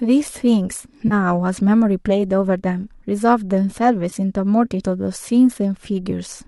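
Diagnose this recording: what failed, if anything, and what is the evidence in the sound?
Network stage: AAC frame loss with concealment, heard as brief smeared, noisy blips at 1.08 to 1.13 s, 4.10 to 4.13 s and 6.11 s. Gaps of 30, 20 and 10 ms match whole 10 ms frames of likely low-delay AAC, which the decoder patched from the last good spectrum.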